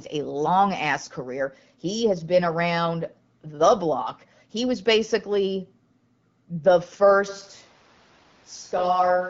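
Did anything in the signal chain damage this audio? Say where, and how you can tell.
Yes. From 7.30 s to the end, the sound turns hollow and roomy, about 5 dB quieter, with room noise about 30 dB below the speech. This is likely a switch to a distant microphone at capture.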